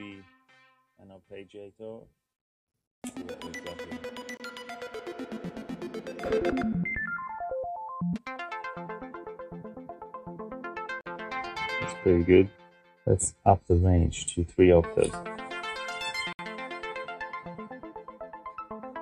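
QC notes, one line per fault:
4.37–4.40 s, 11.01–11.06 s and 16.33–16.39 s, Bluetooth stall: the sound drops out to dead silence for about 27, 49 and 63 ms, then resumes. Likely interference held up wireless packets long enough for the headphones' buffer to empty before the resent data arrived.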